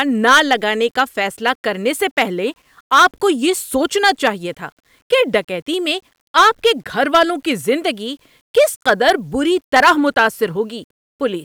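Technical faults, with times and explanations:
Throughout, low bit depth without dither: grainy distortion tracks the speech and quiet tails sputter or drop to silence, likely from rounding to 9 bits, with error roughly 45 dB down.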